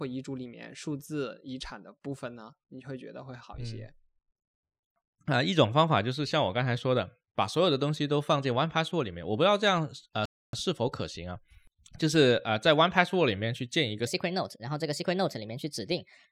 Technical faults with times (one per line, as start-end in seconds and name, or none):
10.25-10.53 rebuffering stall
14.07-16.31 section at the wrong speed